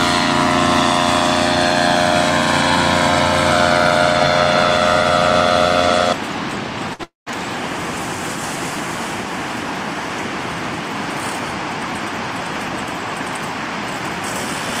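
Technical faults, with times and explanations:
6.93 to 7.01 s, short stall from a late packet: the sound briefly hangs, as the last fragment is stretched for about 59 ms with a faint buzzy edge, then carries on exactly where it left off. A packet missed its playout slot, the jitter buffer emptied, and the receiver filled the wait by extending what it already had. Nothing is lost; the audio is simply pushed 59 ms later. Unlike the freeze that follows, it never decays into silence.
7.03 to 7.29 s, call audio freeze: a much longer interruption of about 233 ms. The held sound turns into a fading buzz and then drops to about 150 ms of silence before the audio resumes from the point where it stopped, with nothing skipped and everything after it running about 233 ms later. This likely comes from a burst of packets delayed in transit that drained the jitter buffer. The decay into outright silence is what separates it from the brief stretched stall just before.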